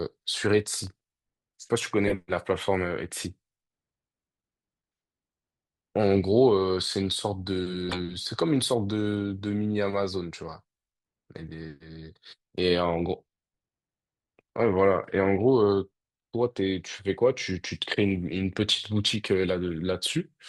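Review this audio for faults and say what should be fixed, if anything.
Processor overload crackle runs from 0.84 to 1.01 s. A handful of very short buffers, a few milliseconds each, miss their deadlines and drop to silence. Keep processing load lower or enlarge the buffer.

Corrupt frame decoded occurs at 2.07 to 2.13 s and 7.89 to 7.99 s. Damaged data in about two frames becomes short bursts of misplaced energy peaking near about -10 and -15 dBFS. Add error checking so damaged frames are concealed instead of played.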